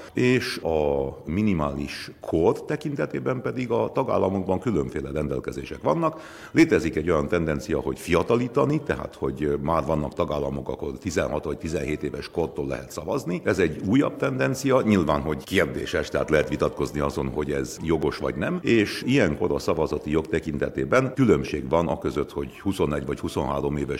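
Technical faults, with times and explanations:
8.70 s, 16.44 s, 18.03 s and 21.48 s: dropped samples. Each is a single sharp click, a brief vertical line across the spectrum. The likely cause is a few samples, under a millisecond's worth, going missing, so the waveform jumps abruptly to a later value and no sound is lost.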